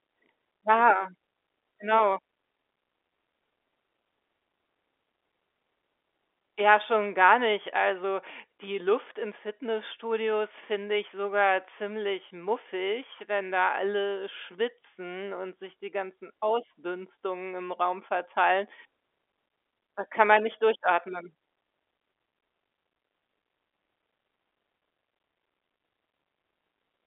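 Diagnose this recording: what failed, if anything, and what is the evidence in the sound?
Nothing stood out on listening: the speech comes across as an ordinary telephone-band line with no audible trouble at any stage.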